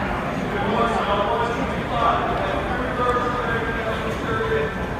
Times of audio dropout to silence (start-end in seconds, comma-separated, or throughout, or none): none